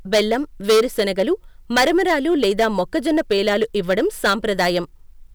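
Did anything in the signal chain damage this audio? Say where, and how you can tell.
Yes. Hard clipping runs throughout the speech, a harsh fuzz on every loud syllable. The input was driven about 11 dB past the limit of a converter or other stage, flattening roughly 4% of the samples.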